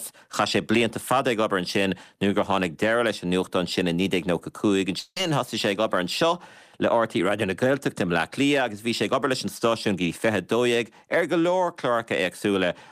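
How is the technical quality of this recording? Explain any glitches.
The speech has one glitch. A long network dropout runs from 4.99 to 5.17 s: about 170 ms of audio likely never arrived, so the receiver stretched the last sound into a fading buzz, leaving a brief silence before the speech resumes with that portion missing.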